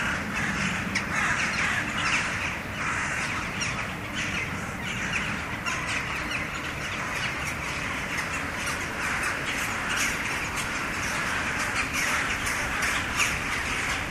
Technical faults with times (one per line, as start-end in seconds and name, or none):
5.66-7.66 adaptive stream at a lower bitrate